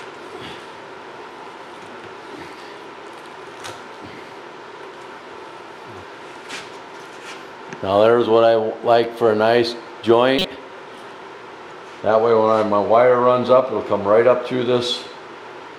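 A corrupt frame was decoded at 10.38 to 10.45 s: flipped bits in a compressed frame went unnoticed, and the decoder played it anyway. The damage spans about two frames, roughly 70 ms. Misread codes or wrong gains put energy at frequencies where it doesn't belong, and that stray energy reaches a fairly high level. It comes through as a brief chirp, squeak, blip or burst of noise that doesn't fit the surrounding sound.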